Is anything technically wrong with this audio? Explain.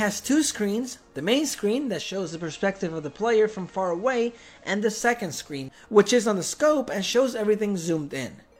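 Yes. From 1.87 to 5.12 s, faint hiss rises about 40 dB below the sound, at unchanged level. This is digital radio blending to analogue: the receiver lost the digital stream, cross-faded over 424 ms to FM, then returned.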